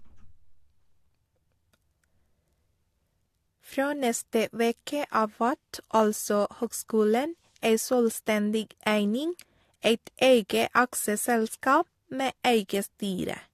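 No faults can be heard anywhere in the recording; nothing drops out, clicks, distorts or glitches at any point.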